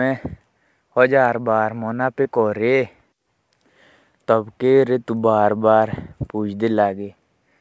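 At 2.24 s the speech has a short concealed packet loss, lasting until about 2.27 s. Roughly 20 ms of audio never got to the decoder in time, and the receiver papered over the hole by stretching out the preceding sound for about 10 ms before easing back into the real signal. You hear it as a quick smear or wobble in the speech. The call path itself, which sounds like G.722 at 64 kbps, keeps nothing above 8 kHz.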